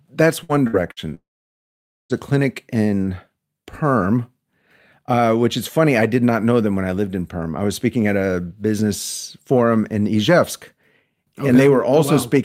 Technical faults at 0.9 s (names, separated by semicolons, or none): burst of packet loss